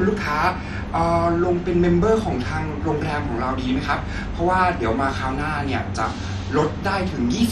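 MP2 compression, throughout the speech, is the likely cause of the dull, gurgling, granular sound: nothing remains above 13.9 kHz, upper sub-bands flicker on and off, and the surviving bands are coarsely quantised. The heavy damage fits a starved bitrate around 56 kbps.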